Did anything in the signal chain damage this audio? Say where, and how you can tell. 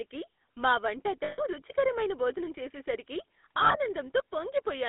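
Yes. The damage is at the codec stage: the whole clip carries GSM full-rate codec coding, and the buzzy, gravelly texture fits a 13 kbit/s GSM full-rate stream. The band is confined to roughly 250 Hz to 3.6 kHz, so nothing survives above the telephone limit. The codec rebuilds the voice from a vocal-tract model excited by sparse, regularly spaced pulses, and that coarse excitation is what produces the plainly audible roughness.

There are also lost GSM frames, at the network or radio stage. From 1.24 to 1.40 s, just before "రుచికరమైన భోజనం చేసేసరికి", about 140 ms of speech is replaced by a held, metallic ring, consistent with seven consecutive 20 ms frames. From 3.58 to 3.77 s, after the same phrase, smaller gaps totalling about 100 ms are scattered over 160 ms, with the longest around 70 ms. The decoder repeats the last good frame's parameters at falling level, so the sound freezes into a decaying ring.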